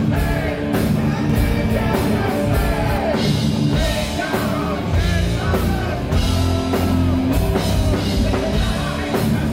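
From 1.30 s to 2.98 s the audio is doubled: a second, full-band copy trails the original by roughly 300 ms, sitting around 5 dB quieter, with no decay or room colour. It snaps in and out abruptly. The likely cause is the signal being captured twice, once through a slower path. On a spectrogram every feature reappears shifted right by that fixed gap; the waveform shows a fainter duplicate envelope offset behind the first.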